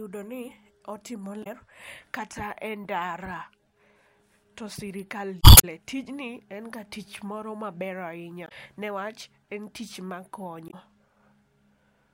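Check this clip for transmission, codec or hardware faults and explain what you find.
The speech carries four short bursts of damaged data in a compressed stream. At 1.40–1.47 s, 5.40–5.65 s, 8.45–8.52 s and 10.67–10.74 s, corrupted bytes break the decoder's frame sync so it hunts for the next valid header, producing brief glitches of about 70 ms, with the second one lasting about 0.25 s.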